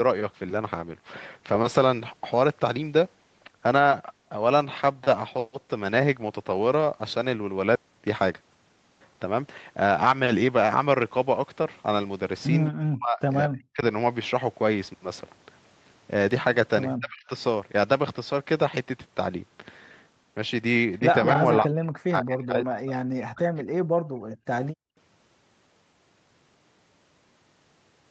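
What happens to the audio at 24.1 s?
From 24.10 to 24.44 s, the background is gated by the echo canceller: it ducks the room sound about 22 dB while the far end plays, then releases, unlike a packet dropout that cuts everything.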